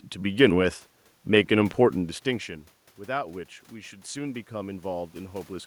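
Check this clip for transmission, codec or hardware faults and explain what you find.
One fault is present: automatic gain rising. The talker moves away from the microphone at about 2 s, and the input drops by about 18 dB. From 2.97 s to 5.62 s the gain control slowly raises its gain by about 6 dB. The voice and the room noise swell together.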